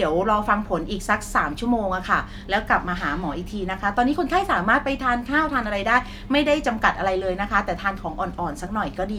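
No technical faults are audible.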